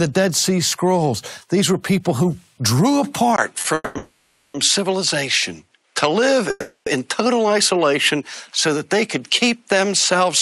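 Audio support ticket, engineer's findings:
Input switched to a poorer device, likely, at 3.36 s. Brief 20 ms dropout at the switch. Duller from there to the end, nothing above 11.4 kHz. A faint new noise floor, roughly 50 dB down. Level unchanged. Points to a narrower-band capture path.

Short stall from a late packet, 3.61 to 3.66 s. Sound held about 30 ms too long. Jitter buffer ran dry briefly. Last frame stretched until the packet landed. Nothing lost, playback resumed in place, 30 ms later.

Call audio freeze, three events. 3.74 to 3.97 s, 210 ms filled, ending in 20 ms of silence. Straight into 3.97 to 4.56 s, 570 ms filled. Then 6.50 to 6.88 s, 360 ms filled. Fading buzz or hiss each time. Likely network hold-up emptying the jitter buffer. Audio resumes where it stopped, so gaps are inserted and nothing is dropped.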